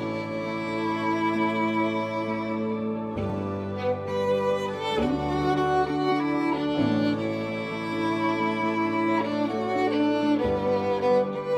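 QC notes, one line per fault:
3.30 s, overlap between stream segments: where two stream segments meet, about 9 ms of sound is trimmed away, so the waveform jumps straight to later material and a tiny skip results. Unlike a dropout, no silence or concealed fill bridges the cut.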